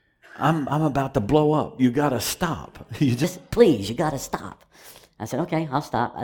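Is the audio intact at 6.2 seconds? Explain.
No. At 6.2 seconds the audio falls inside a section at the wrong speed, running from 3.24 s to the end at 6.24 s. The section plays 1.21 times faster than it was captured, likely because it was fitted to a mismatched clock during editing or playback. Because timing and pitch are tied together, the sound turns hurried and rises by about three semitones, shifting abruptly at 3.24 s and staying high and quick through the final moment.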